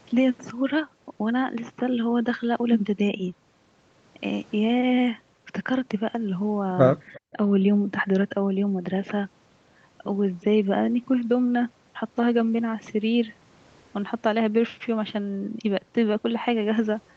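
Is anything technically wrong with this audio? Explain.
Yes. From 7.07 to 7.2 s there is an echo leak: the far end's echo canceller likely failed to remove all of its loudspeaker playback, so a faint copy of the speech returns about 0.36 s late, roughly 25 dB below the main voice, as a brief ghostly repeat.

Just after, from 7.32 to 7.38 s, speech is suppressed in double talk: with both sides active, the echo canceller likely turned the talker down along with the echo. The voice dips by about 5 dB for roughly 70 ms, a short sag, with the call's usual top end stopping near 8 kHz.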